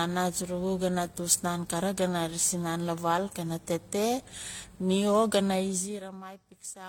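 A speech clip whose whole length carries the layered smearing and swirl of transcoding between lossy codecs, likely an AAC-LC encode re-encoded as HE-AAC, both around 48 kbit/s; unlike a single encode, two artefact types stack. From 5.52 to 6.28 s, zipper noise ticks along as the level drops roughly 20 dB in 1 dB steps, about thirty per second. A smooth fade would glide silently instead.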